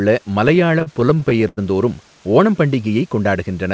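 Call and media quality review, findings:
Choppy, dragging speech from 0.48 to 1.59 s: repeated stalls (stutter), a rapid run of brief holds, the longest about 92 ms, roughly a quarter of that span stretched. Jitter buffer underrunning as packets arrive late; receiver extends the last sound, fading longer waits, then resumes. No audio lost. The call path itself shows as a band limit at 8 kHz plus its usual coding noise.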